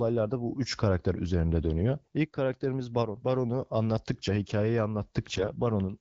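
Speech clip carried over an AMR wideband (HD Voice) link, with AMR bit errors from 5.33 to 5.52 s. For that stretch of about 190 ms, which fits roughly nine 20 ms frames, the voice keeps its pitch and level but turns hoarse and gargly. Poorly protected bits arrived flipped at a rate of around 5 percent while the checksum still passed, so misplaced excitation pulses and skewed gain and spectral values reached the decoder.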